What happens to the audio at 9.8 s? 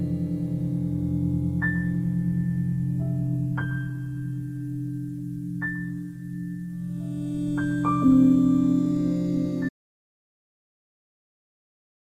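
At 9.8 s the sound is inside an audio dropout to silence that starts abruptly at 9.69 s and runs to the end of the clip. Unlike a fade or noise gate, nothing tapers and no room tone remains, just silence, most likely from a lost input or stray mute.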